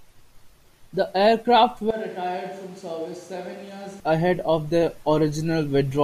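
From 1.91 s to 4.0 s the speech turns hollow and roomy, about 10 dB quieter, with thinner bass and background noise rising to around 25 dB below it. This is likely a switch to a distant microphone. The change comes abruptly just before "ahead of their", and the close sound returns abruptly at 4.0 s.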